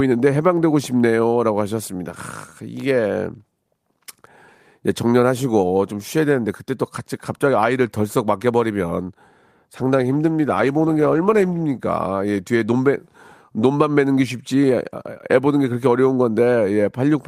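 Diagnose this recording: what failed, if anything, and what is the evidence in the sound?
The call's encoder took a call bitrate drop between 9.78 and 11.71 s. The speech turns rough and watery and loses its top end for nearly two seconds. That fits the bandwidth estimate falling and pushing Opus from around 32 to 14 kbps, so it coded more coarsely until it recovered.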